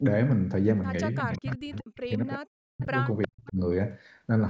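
Speech suppressed in double talk runs from 1.23 to 2.92 s. The level repeatedly falls away, at its deepest by about 40 dB, with roughly one and a half seconds of the speech dipped, thinned or cut into pieces. This is likely an echo canceller that heard the far side talking at the same moment, could not separate the local talker from loudspeaker echo, and turned everything down together.

Within that stretch, an echo leak appears from 1.73 to 1.97 s: a faint, delayed copy of the speech, about 25 dB below it, arriving 359 ms late. It likely comes from a loudspeaker at the other end whose echo canceller left part of the microphone pickup in place and sent it back. A second, shorter and louder scrap at 3.22 to 3.28 s sits about 15 dB down, with the same 359 ms delay.

Speech suppressed in double talk returns immediately after, from 3.28 to 3.58 s. The drop again reaches about 40 dB and affects roughly 300 ms of the sound, clipping it away in fragments. 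The likely cause is the same: the canceller treated overlapping talk as echo and muted the local voice along with it. The call's microphone processing, with nothing above 8 kHz, plays no part in these faults.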